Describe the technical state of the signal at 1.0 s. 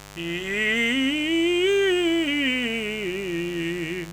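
A steady, raspy buzz sits under the music at 1.0 s, as it does for the whole clip, roughly 20 dB below the music. This is mains buzz tied to a 50 Hz supply. Something like a dimmer, a rectifier or an unshielded run is letting sharp switching spikes into the signal twice per mains cycle. Because those spikes are so abrupt, they carry a dense stack of 50 Hz harmonics up into the kilohertz range, giving the buzz its gritty edge.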